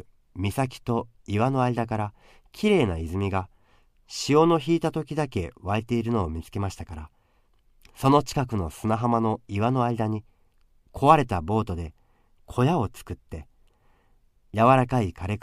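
No audible technical faults turn up anywhere in the speech.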